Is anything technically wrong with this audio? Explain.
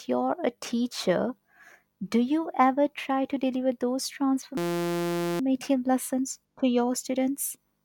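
Yes. A system hang loop runs from 4.57 to 5.40 s, after "try to deliver those". The system froze while the hardware replayed one 5.8 ms buffer, producing a steady 172 Hz buzz.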